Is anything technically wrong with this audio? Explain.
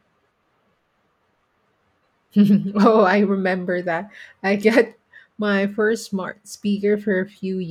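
No, nothing technically wrong turns up on listening to this speech recording.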